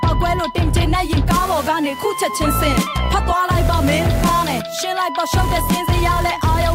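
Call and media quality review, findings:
Nothing to flag here; the audio holds up fine and there's no issue to ticket.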